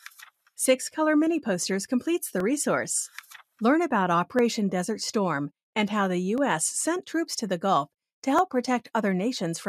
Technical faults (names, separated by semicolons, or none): periodic USB or driver dropouts